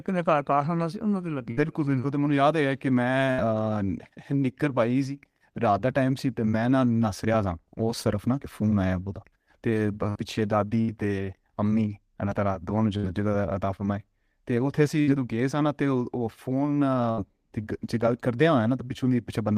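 You'll hear a burst of packet loss seven times, at 1.51, 3.31, 10.10, 10.81, 12.97, 15.01 and 17.11 s. Each time roughly 60 ms of the speech never arrived, so the receiver stretched the last bit it had for about 55 to 65 ms, fading it down. That comes across as a brief held buzz or dying hiss, then the talker jumps ahead with a small chunk missing.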